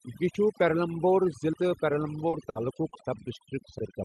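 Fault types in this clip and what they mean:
Overdone noise removal: Noise reduction set far too strong has pushed every band near the noise floor almost to silence, leaving twinkling specks between phrases. A spectrogram shows isolated scattered dots in the background and ragged, patchy harmonics.
Dropped buffer (overrun): A sudden jump forward in the speech occurs at 0.35, 1.53 and 3.79 s. These are likely samples overwritten before being read, losing a brief sliver up to under a tenth of a second. The waveform shows an abrupt discontinuity with no gap.
Short concealed packet loss: At 2.29 s and 2.89 s, 40 ms and then 20 ms of audio never arrived in time. The receiver filled each hole by extending the previous sound, heard as a brief smear. The spectrogram shows smoothed, continued sound blending back into the real signal.
Burst of packet loss: At 2.49 s, 60 ms of audio went missing. 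The receiver continued the last sound while fading it, so a short held buzz or hiss decays before speech resumes further on. It appears as a stretched, dimming band followed by an abrupt restart.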